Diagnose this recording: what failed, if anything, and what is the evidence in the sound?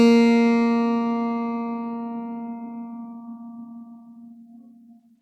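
Nothing in the signal chain of this music recording has failed: the waveform stays continuous and intact, with no dropouts, discontinuities or level anomalies anywhere in the audio.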